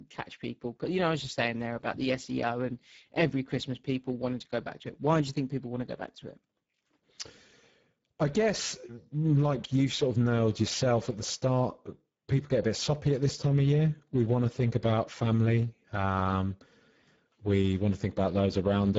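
Speech runs for the full 19 seconds with plainly audible Speex codec damage throughout. The CELP coding has too few bits to model the excitation accurately, and nothing remains above 7.7 kHz. The sound fits a low bitrate of about 10 kbps.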